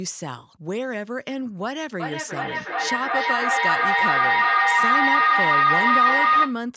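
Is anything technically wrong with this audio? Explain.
Yes. From 2.0 s to 6.65 s there is feedback howl: the speech is caught in a microphone-to-loudspeaker loop that adds level on each pass. A tone around 1.5 kHz swells to about 10 dB above the speech, with the loop repeating roughly every 400 ms. Unlike ordinary echo, the repeats grow rather than fade.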